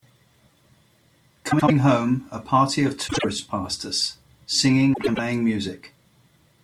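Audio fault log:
1.51–1.71 s, 3.08–3.24 s and 4.93–5.19 s: frames out of order. In each stretch two neighbouring blocks of frames were decoded in swapped order. The halves play exchanged, so the speech briefly turns into a garbled flutter. The swapped blocks are about 78, 52 and 105 ms long, which fits runs of three, two and four frames. No time goes missing.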